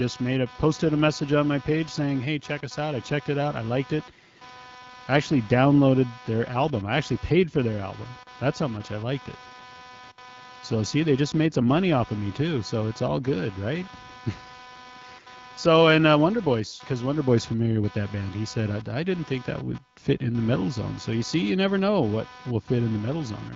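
A speech clip carrying computer activity noise throughout: a buzzy, chirping pulse train at around 300 Hz, roughly 20 dB below the speech, layered over the light HD Voice band-limiting. Unlike steady mains hum, it flickers with processor or mouse load rather than holding constant.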